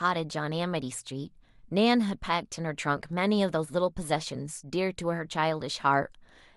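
Speech, with nothing technically wrong to be heard anywhere in it.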